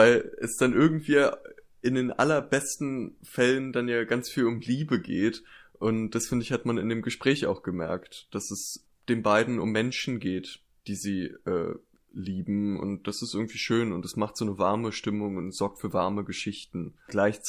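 No technical faults can be heard anywhere in the recording; the signal holds steady throughout.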